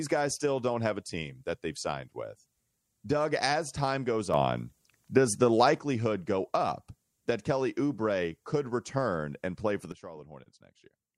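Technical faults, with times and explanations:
4.34–5.79 s and 9.92 s to the end, sudden gain jump: right after "as time goes" the level steps up about 6 dB and drops back before "go up that", then after "return and play for" it falls about 14 dB. Sound and background noise shift together, likely from a gain change applied with no ramp.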